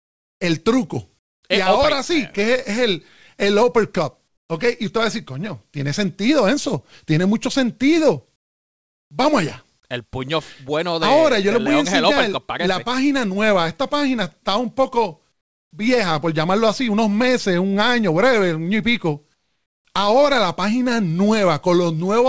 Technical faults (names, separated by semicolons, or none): comfort noise in place of the background